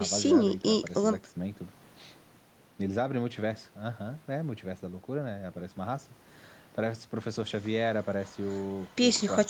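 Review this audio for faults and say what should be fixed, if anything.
No technical faults turn up in this speech recording, so nothing needs fixing.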